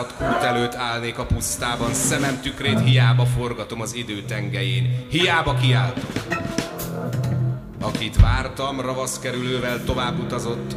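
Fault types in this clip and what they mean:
No technical faults can be heard in this audio.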